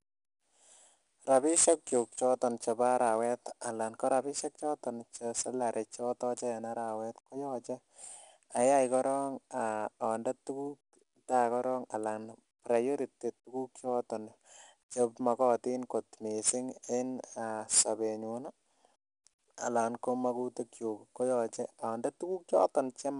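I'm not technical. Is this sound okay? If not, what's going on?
No, the speech has a gritty hiss riding on every loud syllable throughout, plus a dulled top. That's 4-bit ADPCM compression storing each sample too coarsely.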